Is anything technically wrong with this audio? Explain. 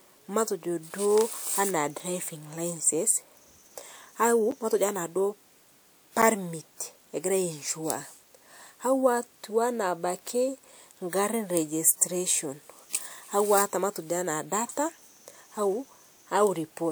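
Yes. There are two blocks of digital silence in this speech, at 4.51 s and 6.22 s, each about 8.7 ms long. A run of samples was replaced by zeros, which points to an output buffer that wasn't filled in time. The signal drops straight to silence and returns with no fade, and at this length each gap comes across as a brief tick or pop rather than an audible hole.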